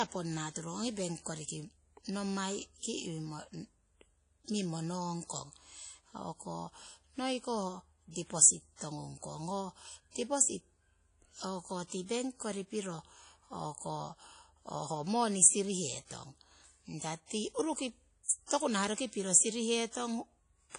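Across the whole of the speech, the sound has a ringing, washy quality with a hiss that swells and recedes with the signal, and nothing is present above 10.1 kHz. This is likely WMA compression at a low bitrate. The band limit and plainly audible damage fit a first-generation Windows Media Audio encoder running at around 32 kbps. Long transform blocks let quantisation noise smear over tens of milliseconds, and weak spectral lines are discarded outright, which thins the texture.

From 18.46 to 18.50 s a pre-echo appears. A brief hiss leads into a sharp onset, spread over about 37 ms before it, and the attack itself sounds softened and smeared rather than crisp. The transient landed late within a transform block. The codec sized its quantisation noise for the loud attack and distributed it across the full block, so that noise also fills the quiet interval just ahead of the onset.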